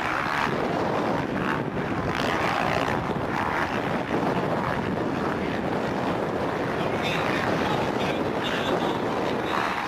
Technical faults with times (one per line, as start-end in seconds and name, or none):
none